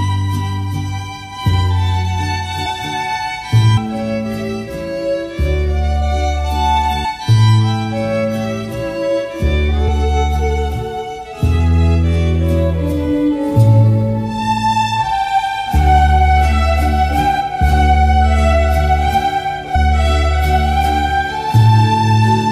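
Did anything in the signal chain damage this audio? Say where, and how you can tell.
Yes, compressed frames skipped at the decode stage. Jumps at 2.65, 3.76, 7.04, 9.87, 17.39 and 19.74 s, each jumping ahead by whole frames of about 23 ms.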